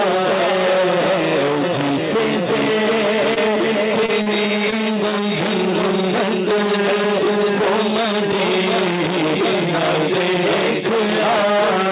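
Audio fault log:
3.34–3.38 s, 4.06–4.10 s, 4.22–4.28 s, 4.70–4.74 s: short concealed packet loss. Four little gaps where audio didn't reach the decoder in time, about 20 ms each except the 40 ms one at 4.22 s. The receiver papered over each by carrying the previous sound forward and easing back into the real signal, so you get a quick smear or wobble rather than silence. All of this sits on a band capped at 4 kHz, which fits a narrowband call codec.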